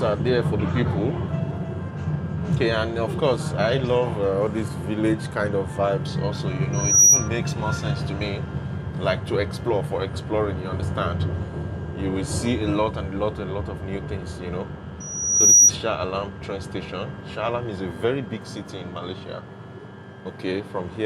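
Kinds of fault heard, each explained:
Loudspeaker feedback squeal: the microphone hears its own loudspeaker and the loop gain tops one at 5.8 kHz, so a tone swells over a few tenths of a second to roughly 15 dB above the sound, twice, near 6.7 and 15.0 s; a spectrogram shows a bright horizontal line.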